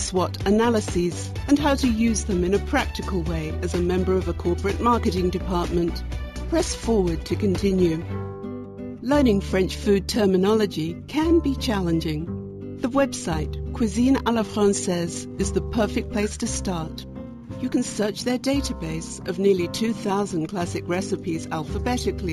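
Imaging from linear upsampling runs through the whole clip. The top of the band sounds dulled. A faint metallic shimmer sits above it, between 8 and 16 kHz, about 25 dB below the signal. It fits a straight-line rate rise from 16 kHz to 48 kHz.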